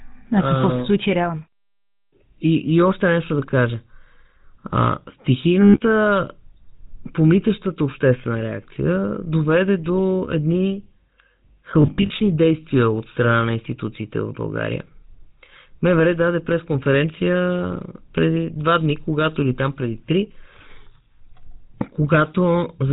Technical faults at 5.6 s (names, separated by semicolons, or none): GSM full-rate codec; lost GSM frames